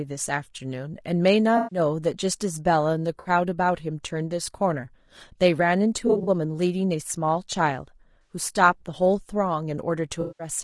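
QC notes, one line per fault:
Throughout: low-delay AAC compression. The speech sounds rough and grainy, with noise between the harmonics and a thin, synthetic top band. This fits AAC-ELD at around 32 kbps. Its short frames likely resolve pitch harmonics poorly and starve each frame of bits.
1.57–1.79 s, 3.19–3.29 s, 6.07–6.29 s, 8.21–8.35 s, 10.21–10.47 s: AAC frame loss with concealment. Stretches of 140, 60, 80 and 180 ms sound smeared, noisy and phasey. At 6.07 s, 120 ms of short gaps are scattered over 200 ms. The decoder rebuilds each gap from the last good spectrum.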